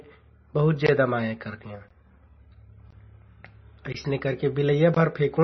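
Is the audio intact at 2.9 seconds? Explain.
No. A gap between chunks interrupts the sound from 2.91 to 2.93 s. For 20 ms there is a hole of silence at a join. That points to audio handled in 1-second chunks with a short gap inserted between them.

The same moment also carries heavy compression damage. Nothing is heard above 5.9 kHz. The sound is watery and swirly, and attacks are smeared. The likely cause is MP3 compression, and the damage fits a bitrate of about 24 kbps.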